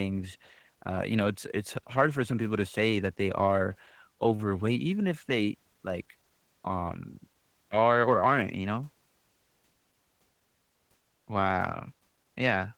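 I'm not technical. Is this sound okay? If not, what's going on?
No. Throughout the recording, the speech went through Opus voice compression squeezed hard to save space. It rebuilds the voice from a rough model, with a thin extra layer for the high end. The result is plainly audible: speech sounds hoarse, grainy and slightly robotic.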